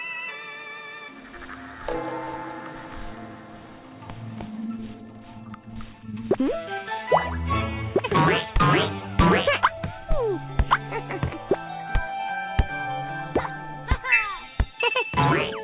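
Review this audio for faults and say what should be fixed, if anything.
Short concealed packet loss at 5.74 to 5.77 s: about 20 ms of audio never arrived in time, so the decoder extended the preceding sound to bridge the hole, leaving a brief smear. On a spectrogram it appears as a thin band of stretched, slightly blurred energy before rejoining the real audio. To prevent it, improve network stability or enlarge the jitter buffer so late packets still arrive in time.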